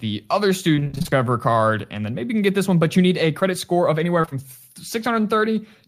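A speech recording with two kinds of network damage. From 0.75 to 1.13 s, just before "card and then maybe", repeated packet loss (robotic sound) chops the voice into a choppy stutter. Holes up to about 23 ms recur so often that nearly half that stretch is filled-in sound. A single dropout would not sound like this. Short concealed packet loss appears at 3.39 to 3.43 s, between "but you need a" and "score of anywhere", and again from 4.21 to 4.33 s, right after "score of anywhere". Each lost 20 ms chunk is patched from the preceding sound, which leaves a brief smear or wobble rather than sustained choppiness.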